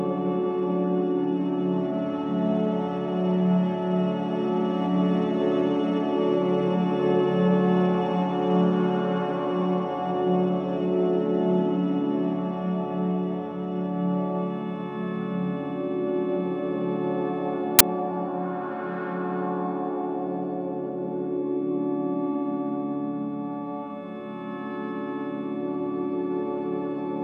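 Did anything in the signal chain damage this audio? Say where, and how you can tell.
Yes, at the storage stage. At 17.79 s a hard-edged burst of static lasting about 17 ms cuts in. It is file tags played as audio: the embedded cover picture's compressed bytes were decoded as samples. Compressed data is close to random, so it comes out as very loud white noise. On the waveform it shows as a thin block of dense, high-level noise with vertical edges. On a spectrogram it is a narrow column spread evenly across all frequencies.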